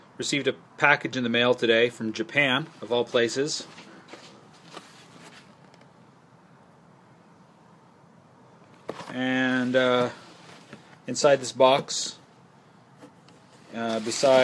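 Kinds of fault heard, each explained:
No technical faults are audible.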